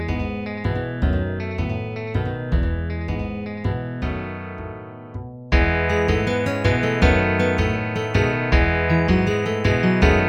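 A doubled audio track runs from the start to 3.72 s: a flat, roughly 100 ms copy about 5 dB down, visible as repeated waveform onsets, ending abruptly, likely from an out-of-step edit.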